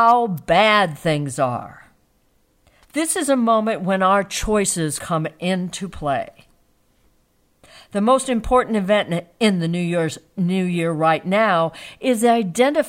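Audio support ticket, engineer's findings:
Sharp snap at 0.38 s, riding on top of the speech, roughly 7 ms long. Probable component: external electrical switching spike, likely a nearby switch, motor or static discharge arcing and coupling a brief transient into the audio line.

Short glitch from 4.95 to 5.00 s, about 44 ms. Probable component: damaged data in the compressed stream. The decoder misreads corrupt frames, loses sync and skips forward to the next valid frame header.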